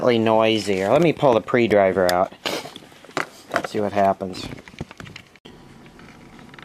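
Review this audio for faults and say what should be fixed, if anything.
From 0.0 to 4.39 s, a wrong sample rate plays the sound 1.09 times fast and 1.47 semitones high. This fits 44.1 kHz audio played at 48 kHz. Resample to the output rate before playback.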